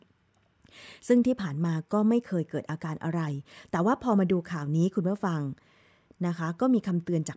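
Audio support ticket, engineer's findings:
No faults found; speech passes through standard call microphone processing, bandwidth tops out at 8 kHz and the lowest bass is trimmed by the usual high-pass, both expected behaviour.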